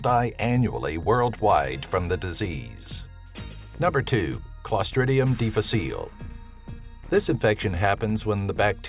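No technical faults are audible.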